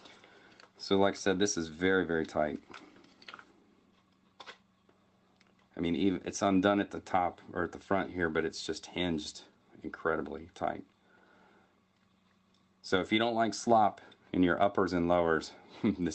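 No technical faults can be heard anywhere in this recording.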